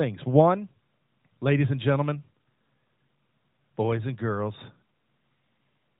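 Speech, with no technical faults to report.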